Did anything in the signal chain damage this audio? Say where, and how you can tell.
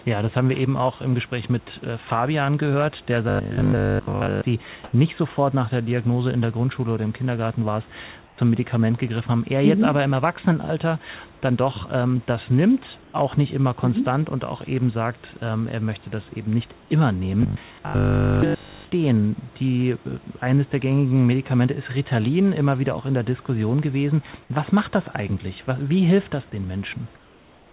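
Yes. In the call's receive buffer, audio likely arrived too seldom, so the last 20 ms was looped between 3.29 and 4.45 s and again between 17.43 and 18.87 s. That robotic sound from repeated short buffers imposes a rigid 50 Hz metallic buzz over most of the sound.

The call processing's discontinuous transmission likely cut audio during pauses, putting comfort noise in place of the background at 4.84, 8.26, 13.02 and 16.8 s (80 to 120 ms each) and from 27.16 s to the end. The room noise, about 31 dB below loud passages, becomes flat and featureless. It jumps about 10 dB louder at 4.84 s and drops roughly 3 to 4 dB at 8.26 and 27.16 s.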